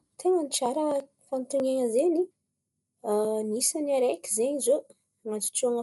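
Throughout, the speech sounds dull and rough, fluttering around tones, likely Dolby Digital compression fitting 64 kbps; the spectrogram is empty above 11.6 kHz.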